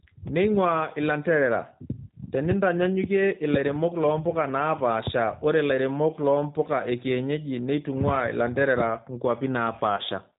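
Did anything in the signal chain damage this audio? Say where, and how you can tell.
Yes. The codec stage damaged it. A G.729 codec runs through the whole speech clip, and the damage is plainly audible. Nothing above 4 kHz survives, so the top end is missing. The speech sounds rough and slightly synthetic. That fits 8 kbit/s G.729A. The decoder rebuilds each 10 ms frame from a vocal tract filter, a pitch predictor and a few pulses. It discards the fine detail of the real waveform.

There are two bit error spikes. The first is at 7.74 s, just after "ilairemok loo mpuka ekienyeji". The second is at 9.67 s. Each is one sharp, broadband tick that has nothing to do with the speech around it. This points to storage or a digital link. A flipped bit makes a sample jump by a power of two and then snap back. The first tick fits one corrupted sample, and the second fits two in a row.

VoIP packet loss concealed by the speech codec shows up from 9.97 to 10.02 s. 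About 20 ms of audio is gone, which fits one lost packet on the network. In its place you hear a brief buzzy tone or coloured noise that fades. The decoder has extended its last pitch and filter settings and lowered the gain frame by frame. Each frame depends on the one before, so the speech stays weak or distorted for a short while after the gap.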